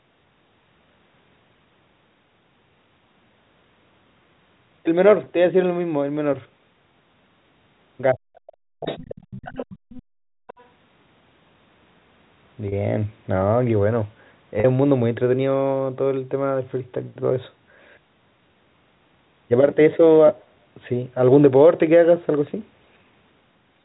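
At 5.24 s there is a brief packet loss with pitch repetition. About 20 ms of audio is missing. The receiver fills it by repeating the last pitch period, so the speech holds for an instant with a faint buzzy edge before it carries on.

From 8.13 to 9.1 s the speech is suppressed in double talk. The talker's level sinks, at its deepest by roughly 40 dB, over about 0.7 s in total. Both sides were likely talking at once, and the echo canceller, unable to tell the talker from the loudspeaker echo, turned everything down. A shorter dip follows from 9.29 to 9.46 s, about 25 dB deep.

Overlapping this, the other side's voice leaks through from 8.85 to 9.25 s and again from 9.45 to 10.02 s. It sits roughly 15 dB below the talker. The likely cause is loudspeaker sound the echo canceller did not fully remove from the microphone. A fainter scrap, about 25 dB down, returns from 10.47 to 10.65 s.

Between 10.02 and 10.47 s the background is gated by the echo canceller. 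The room sound drops by about 34 dB for roughly half a second while the loudspeaker plays, then comes back when the canceller releases. The effect is a sudden hole of near silence.

At 12.68 to 12.72 s and at 14.60 to 14.64 s, two more packet losses with pitch repetition each remove about 40 ms. The repeated pitch period stretches into a slightly held, buzzy tone that begins to fade before the speech returns through a short cross-fade.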